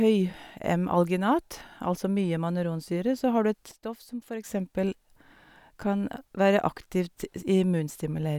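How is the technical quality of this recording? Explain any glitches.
The recording has one clear glitch. From 3.72 to 4.44 s a sudden gain jump drops the level by about 10 dB, likely a digital gain change applied instantly without a ramp. Speech and background noise fall together with no fade, which distinguishes it from a gradual fade or a noise gate, and both snap back at 4.44 s.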